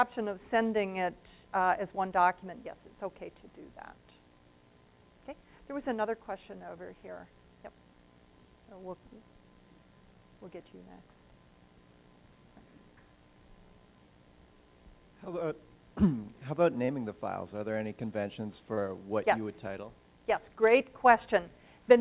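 Short concealed packet loss at 16.85–16.91 s and 18.74–18.80 s: about 30 ms each went missing, and the receiver extended the preceding sound before blending back, leaving a brief smear. The band stops at 4 kHz, as on a G.711 A-law call path.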